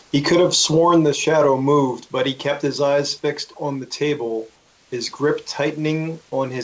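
Discontinuous transmission likely paused sending twice, and the receiver filled the gaps with comfort noise in place of the background, at 0.00–0.12 s and 4.56–4.92 s. The real room noise becomes a smooth, featureless hiss, about 1 dB and then about 4 dB quieter.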